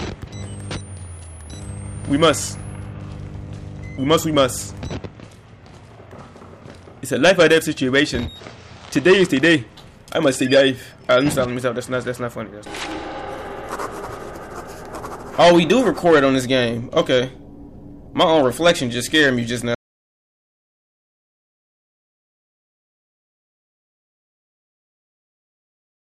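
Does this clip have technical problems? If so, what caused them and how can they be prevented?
Yes. The input was likely lost, so silence was written from 19.75 s to the end: an audio dropout to silence, with no room tone. Secure connections and monitor input levels during recording.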